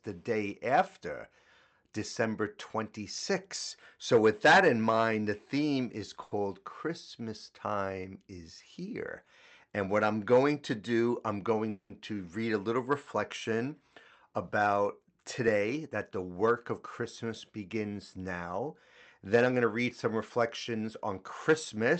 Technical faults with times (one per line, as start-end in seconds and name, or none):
6.23-6.43 short stall from a late packet
11.12-11.65 jitter buffer speed-up
11.70-11.92 call audio freeze
14.76-16.05 jitter buffer speed-up
19.45-20.91 jitter buffer speed-up